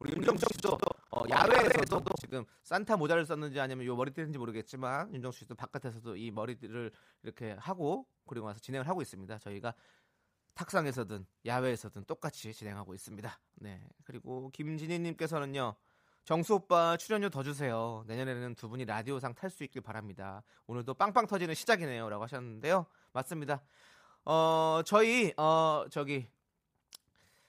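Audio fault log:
0.00–2.34 s, buffer tearing: a robotic rattle at 25 Hz rides on the speech because a bit under half of each buffer replays audio from around 150 ms earlier, spliced in with hard joins. Unlike dropouts, nothing goes silent, and the rattle follows the signal.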